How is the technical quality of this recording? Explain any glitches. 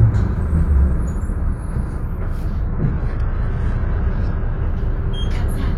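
The recording has one clear glitch. From 2.67 to 4.67 s it switches to an adaptive stream at a lower bitrate. The player dropped to a cheaper version of the stream while the connection slowed, then switched back. Throughout that stretch nothing is heard above 11.4 kHz, and the top end takes on a synthetic, swirly quality, which fits a move from roughly 96 kbit/s AAC to a 12 kbit/s HE-AAC stream. Unlike a packet-loss dropout, the sound never breaks off. The quality changes abruptly at both edges.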